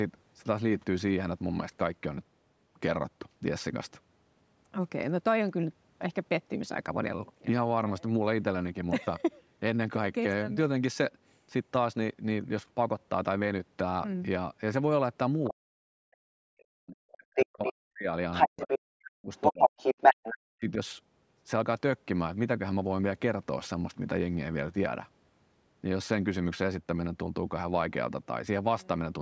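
Other side's voice leaking through appears in this speech recording at 15.44 to 15.5 s, 17.12 to 17.71 s, 18.32 to 18.78 s and 19.35 to 20.36 s. The far talker, played on a loudspeaker, likely reached the microphone past an incomplete echo canceller. The first scrap sits well below the speech, while the later ones are roughly as loud as or louder than it. Speech suppressed in double talk follows at 15.5 to 18.08 s, 18.46 to 19.75 s and 20.33 to 20.78 s. Here the near voice dips by as much as about 40 dB, likely because the canceller could not tell it from the overlapping echo and attenuated everything.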